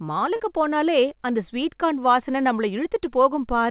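At 0.36 to 0.41 s, just before "போனாலே அந்த ஸ்வீட் கார்ன்", a short concealed packet loss leaves a brief smeared wobble where about 40 ms of audio went missing and 34 ms was patched from the preceding sound, not left silent as in a plain dropout.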